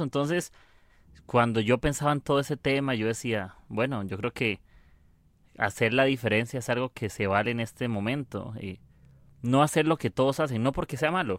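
No technical faults detected.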